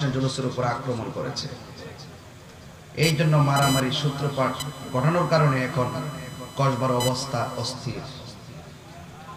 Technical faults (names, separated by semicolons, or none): computer activity noise